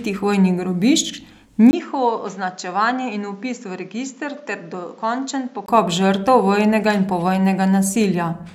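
Input switched to a poorer device, 1.71 to 5.68 s: after a 20 ms gap the speech, from "žrtev vojnega in", turns duller and about 10 dB quieter, with nothing above 7.6 kHz and new noise roughly 35 dB down, likely from another microphone, until it sounds clear again.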